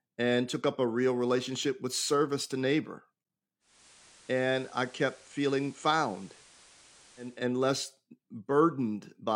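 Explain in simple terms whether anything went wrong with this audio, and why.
Yes, at 3.6 s, right after "with service to neighbor", the radio did a digital radio blending to analogue, fading over 0.29 s to the FM broadcast until 7.5 s. Unlike a dropout, the speech continues, just with some added hiss.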